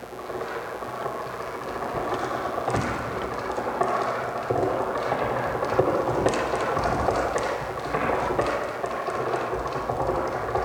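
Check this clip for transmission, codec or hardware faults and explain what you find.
There's one fault, and it runs the whole way through: mains buzz. Something like a dimmer, a rectifier or a missing shield is letting sharp switching spikes into the chain twice per cycle of the 60 Hz supply, so you get a dense stack of 60 Hz harmonics climbing up into the kilohertz range. It sits roughly 25 dB under the sound itself, a steady, raspy buzz underneath everything.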